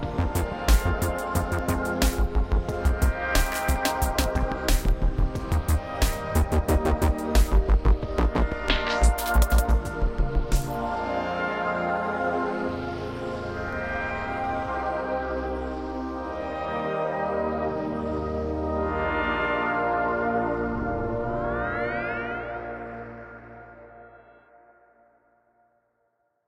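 A recording of sounds, marked by two isolated sharp clicks at 3.76 s and 13.73 s, each showing as a thin vertical line through the spectrum. These are most likely dropped samples: a fraction of a millisecond of the stream, only a handful of samples, goes missing, so the waveform leaps straight from one value to a later one. The gap is far too brief to remove anything audible, leaving just that abrupt step as a click.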